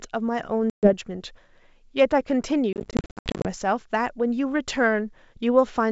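This speech clip suffers from packet loss on an ADPCM call, over a wideband line whose clean tone up to about 7 kHz points to G.722. Around 130 ms of audio vanishes between 0.70 and 0.94 s, then roughly 430 ms between 2.73 and 3.48 s in scattered gaps, none longer than 70 ms. Unlike a simple mute, each hard-edged hole is followed by brief, slightly distorted speech. The receiver's predictor and step size have drifted from the sender's and take tens of milliseconds to recover.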